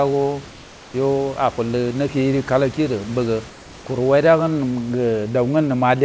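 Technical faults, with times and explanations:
0.50 to 0.94 s and 3.50 to 3.86 s, comfort noise in place of the background: during these pauses the room's textured background, about 23 to 24 dB below the speech, turns into a steady, featureless hiss about 2 to 3 dB quieter. The likely cause is discontinuous transmission, where the receiver synthesises shaped noise until speech resumes.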